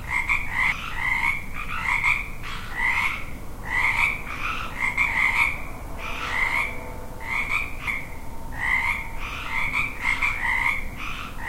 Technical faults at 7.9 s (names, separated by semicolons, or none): damaged data in a compressed stream